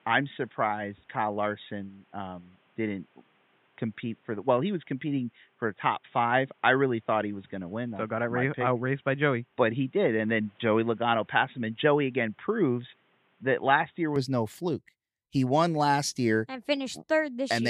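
From the start until 14.16 s, the speech sounds dull and boxy. Nothing comes through above about 3.8 kHz. A faint background noise sits well below the voice, roughly 40 dB down. At 14.16 s, just before "no fluke", the sound opens up at once, with no gap and no jump in loudness. This is an input switched to a poorer device, likely a narrowband microphone or headset call profile, before the better input took over.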